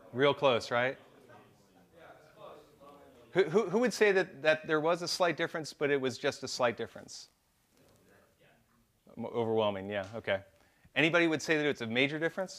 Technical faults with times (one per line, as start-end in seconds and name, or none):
none